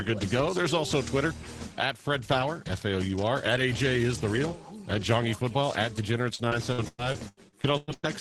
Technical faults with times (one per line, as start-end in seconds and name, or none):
6.35-8.05 repeated packet loss (robotic sound)